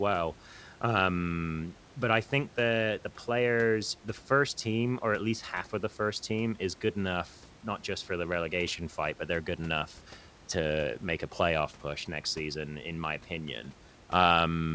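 No technical faults are audible.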